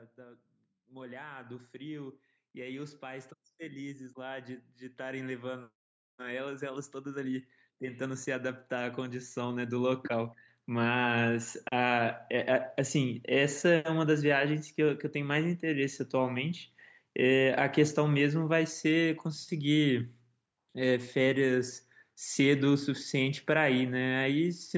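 From 0.16 s to 11.42 s the speech and its background noise swell together by about 20 dB. This is automatic gain rising: the gain control judged the input too quiet and raised its gain slowly. Because the climb is smooth and spread over eleven seconds, it differs from a compressor pumping on each syllable or an abrupt level step. The call microphone path limits the band to 8 kHz.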